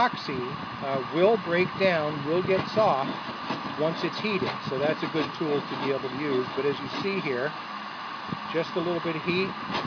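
Nothing is technically wrong with this audio.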